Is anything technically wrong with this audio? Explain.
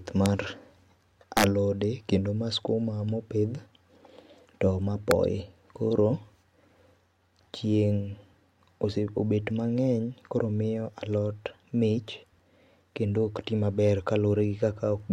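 Yes. Integer overflow cracks occur at 0.26 s, 1.37 to 1.44 s (before "alode kendo ma skuma", overdriven about 4 dB), and 5.11 s (after "to ma"). Peaks wrap to the opposite sign, leaving sudden vertical jumps in the waveform and broadband spectrogram streaks.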